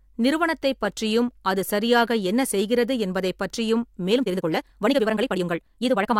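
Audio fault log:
4.08–6.19 s, time-stretched section: From 4.08 s to the end, the speech suddenly runs 1.92 times faster, yet its pitch does not rise. The pace jumps at once while the voice keeps the same height. It sounds rushed. Software squeezing this stretch into a shorter length is likely dropping short pieces of the waveform to hold the pitch.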